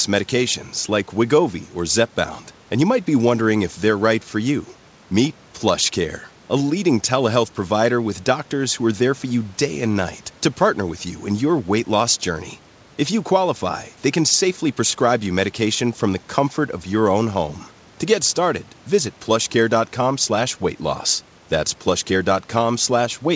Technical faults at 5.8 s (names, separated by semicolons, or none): none